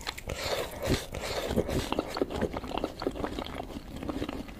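A doubled audio track runs throughout: a dry, full-band copy trails about a second behind at similar level, likely captured again by a slower path.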